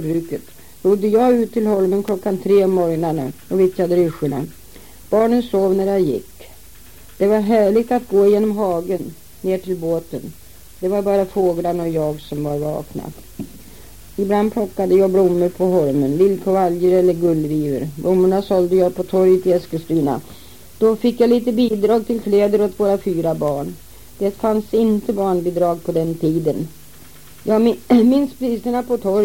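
A sharp snap cuts through the sound at 2.08 s, and another at 23.48 s. Both are electrical switching spikes, likely a nearby switch arcing into the audio line.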